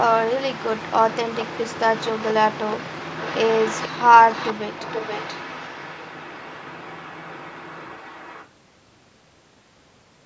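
Echo leak at 1.34–1.45, 1.99–2.33, 2.69–2.76, 3.19–3.88, 4.29–4.53 and 4.77–8.48 s: a faint copy of the speech returns 483 ms late, about 15 dB down (about 10 dB at 4.29 s), likely from a far-end loudspeaker echo the canceller missed.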